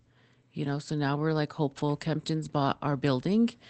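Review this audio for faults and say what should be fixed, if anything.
Right after "so now we're like", from 1.77 to 1.79 s, there's a lost packet rebuilt from error correction: a brief rough, noisier patch, consistent with a single 20 ms packet patched from Opus's low-bitrate backup copy over the 24 kbps, 8 kHz call path. Cutting packet loss on the network, or raising the bitrate so the redundant copy is cleaner, would prevent it.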